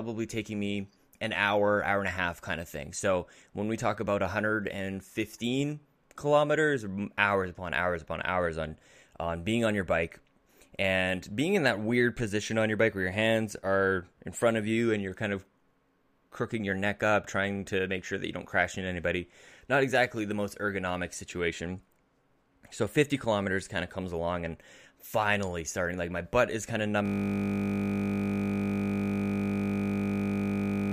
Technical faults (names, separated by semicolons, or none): system hang loop